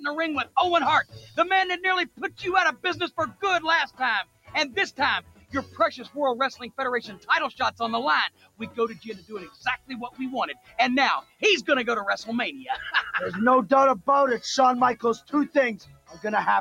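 A speech-tuned noise suppressor stays active across the whole clip, treating steady and sustained parts of the sound as noise. The result is a noise suppressor applied to music or sounds: level pumps by roughly 15 dB, so held parts sink and tails thin while sharp onsets pass. The suppressor then turns sound down further between 0.45 and 1.38 s (drops of about 18 dB, roughly half a second in total), across 2.06 to 11.43 s (about 20 dB, some five seconds affected), and from 14.96 to 16.24 s (about 19 dB), where decays vanish early.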